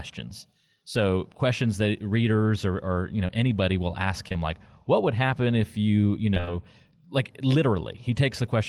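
A brief smear falls at 3.27 to 3.30 s, between "or or you know" and "anybody will ask". Two more follow back to back at 4.28 to 4.32 s and 4.32 to 4.36 s, just after "know anybody will ask". These are short concealed packet losses: roughly 20 ms chunks of the call arrived too late, and the receiver patched each hole by extending the preceding sound before blending back.

From 6.34 to 6.53 s, right after "happen if you you", the sound turns choppy. This is repeated packet loss. Several holes land in quick succession, the longest about 23 ms and about 80 ms missing in all. Concealment refills nearly half of that stretch with continued sound.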